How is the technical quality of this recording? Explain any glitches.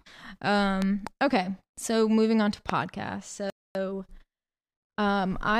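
The recording has clear technical faults: sharp pops early on, then a brief dropout followed by a hurried passage.

Loud pops occur as a pair between 0.82 and 1.09 s and as a single pop at about 2.70 s, each peaking roughly 15 dB above the speech, which carries on underneath. A short pulse of voltage was added to the signal, likely from a plug, switch, static discharge or driver glitch, and the following circuitry shaped it into a sharp, percussive pop.

A playback stall runs from 3.50 to 3.75 s. The speech cuts off mid-flow and the output is silent for about 250 ms before sound resumes. The likely cause is the player running short of data, or its processing thread being blocked, so nothing reached the output until it recovered.

Time-compressed catch-up follows immediately, from 3.75 to 4.25 s. To absorb the backlog left by the stall, the player drops small segments and cross-fades the remainder, running the audio at about 1.5 times normal speed. 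Pitch stays unchanged, so the speech sounds rushed.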